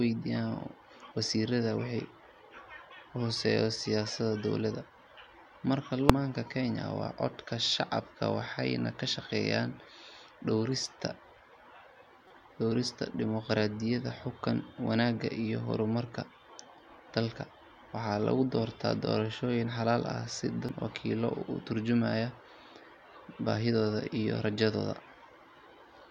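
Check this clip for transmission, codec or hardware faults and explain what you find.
The speech carries one fault type, damaged data in a compressed stream, at three points: a brief blip at 6.10 s, a longer one from 12.27 to 12.31 s, and another blip at 20.69 s. Corrupted bytes make the decoder misread those frames and lose sync until it finds the next valid frame header, producing short glitches where that audio is lost.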